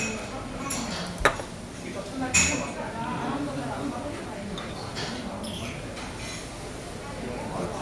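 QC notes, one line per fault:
No audible faults found.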